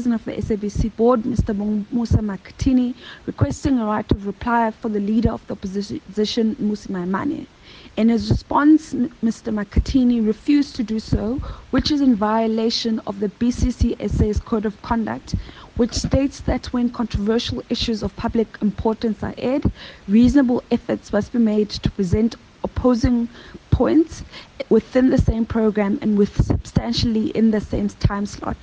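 No technical faults can be heard anywhere in the audio, and the signal stays steady and intact throughout.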